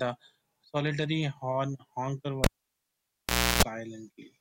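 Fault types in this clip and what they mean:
Cable pulled and plugged in: the live lead comes out and goes back in, giving a pop, 1.14 s of near-silence, 60 Hz mains buzz, then another pop.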